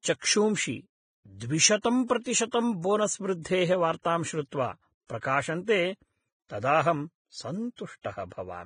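Vorbis compression runs through the whole speech clip: the treble stops sharply at 9.7 kHz, and what remains up there is hissy and grainy, with blurred consonant attacks. This is likely heavy Vorbis coding, which fits a bitrate of around 20 kbps, replacing fine high-frequency detail with coarsely quantised noise.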